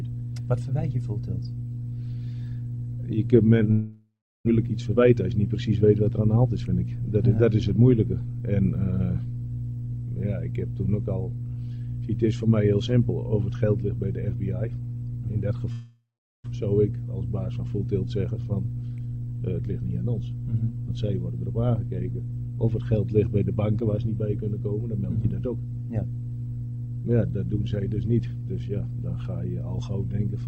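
Long network dropout at 3.71 to 4.49 s: the sound stops being fresh and the last fragment is drawn out as a fading buzz for about 0.76 s, leaving roughly 0.35 s of near-silence before audio resumes with about 600 ms of material skipped. The likely cause is a stall in packet delivery, with the receiver concealing the gap by stretching what it last had.

Jitter buffer speed-up at 4.65 to 5.83 s: the delayed packets then arrive in a bunch, so the buffer sits around 150 ms deeper than its target. The receiver trims short pitch-period slices repeatedly, and the audio plays about 10% fast at unchanged pitch, sounding briefly rushed.

Long network dropout again at 15.72 to 16.48 s: about 0.74 s of decaying fill, roughly 0.42 s of silence, and about 600 ms lost, behaving the same way as the first.

Jitter buffer speed-up at 16.56 to 18.29 s: a milder catch-up at about 7% faster, again trimming roughly 150 ms of backlog.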